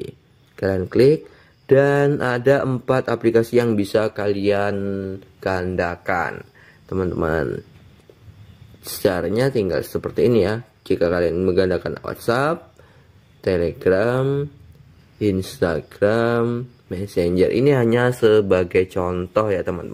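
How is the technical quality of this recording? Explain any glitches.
No glitches or faults heard.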